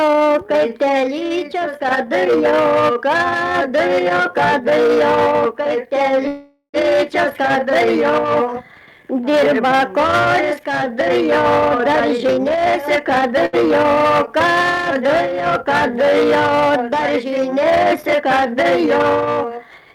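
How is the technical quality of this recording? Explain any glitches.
The recording has three audible timing glitches, all grouped in two spots, each caused by audio arriving late or unevenly over a network link.

From 6.27 to 6.76 s there is a call audio freeze. The audio stops moving forward for nearly half a second. The last sound is drawn out into a fading buzz, with about 50 ms of near silence, and then resumes exactly where it left off, so nothing is lost but 462 ms of delay is inserted. The likely cause is packets held up in transit until the jitter buffer ran dry. On a spectrogram this appears as a smeared, repeating band of the final spectrum that fades out. The waveform shows a repetitive, decaying tail and then a short flat stretch.

From 11.76 to 13.36 s a jitter buffer speed-up occurs. Having built up too much queued audio, the receiver repeatedly removed slivers a pitch period or so long, trimming roughly a fifth of a second in total. 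The passage plays at about 113% speed with unchanged pitch and sounds rushed. On a spectrogram, events sit closer together in time while harmonic spacing stays the same. The waveform shows tiny splice points with no dropouts.

At 13.46 to 13.55 s, just after the speed-up, a short stall from a late packet holds a sound for 74 ms while the buffer waits, then continues with nothing missing. It is heard as a brief hold with a slight buzz or dip. On a spectrogram it is a small horizontal streak. In the waveform it is a short repeated cycle.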